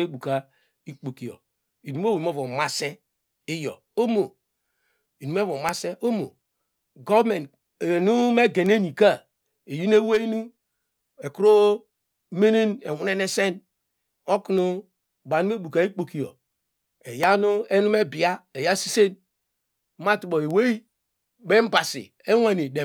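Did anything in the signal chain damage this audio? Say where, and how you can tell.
Yes. The damage entered at the analogue wiring stage, where an electrical switching spike, likely from a nearby switch, motor or static discharge arcing, was picked up by the audio line. It is heard as a sharp snap riding on top of the speech at 5.69 s, peaking near -5 dBFS, and again at 17.23 s, weaker at about -10 dBFS. Each is over almost instantly, which fits a brief arc rather than a fault in the recording itself.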